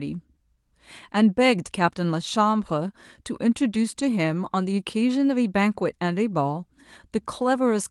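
Nothing stood out on listening to this speech, which has the band-limited sound of a call codec whose top end stops around 12 kHz.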